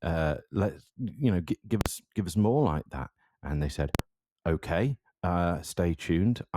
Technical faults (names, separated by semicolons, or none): invalid numbers at full scale